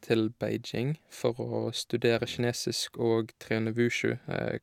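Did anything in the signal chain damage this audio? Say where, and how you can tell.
No, nothing along the chain has left a mark on this speech that I can hear, so there's no stage to point to here.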